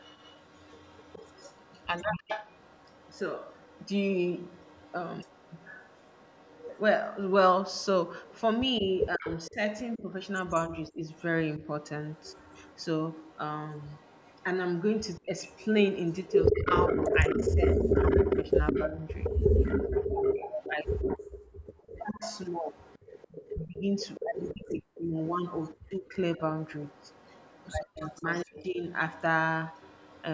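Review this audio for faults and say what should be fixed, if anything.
A second copy of the sound trails the original by 161 ms from 0.0 to 30.23 s, at about 5 dB below it. This is an echo leak, likely from a loudspeaker-side echo canceller that failed to remove its microphone pickup. A spectrogram shows each syllable's harmonic pattern repeated slightly later, and the waveform shows doubled onsets. Fix it by lowering loudspeaker volume or using a headset, and by letting the canceller converge before speech.

Speech suppressed in double talk dips the audio between 8.8 and 11.61 s, 15.2 and 20.18 s, 22.12 and 26.4 s, and 27.93 and 28.84 s. The dips are deepest at about 20, 15, 40 and 40 dB, and last about 0.5, 0.7, 1.5 and 0.7 s in total. The likely cause is the canceller confusing overlapping talk with echo and attenuating both. The waveform shows abrupt notches. Prevent this with a canceller tuned for full-duplex double talk.

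Background gated by the echo canceller drops the room sound by about 37 dB from 21.39 to 21.77 s, roughly 0.4 s, before it returns. On a spectrogram the noise floor goes nearly blank, and the waveform flattens to near silence. The canceller clamped the microphone while the loudspeaker played. This can be avoided by adding comfort noise and easing the suppression's release.

The call's microphone processing, with nothing above 8 kHz, is expected and needs no change.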